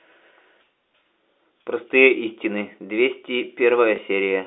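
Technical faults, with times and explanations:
3.96 s, packet loss with last packet repeated: 20 ms of speech is missing, which fits one lost 20 ms packet, and the receiver fills the gap by replaying the stretch just before it, giving a small blip. The waveform shows a duplicated 20 ms block. The spectrogram is capped below 4 kHz by the G.711 telephone coding.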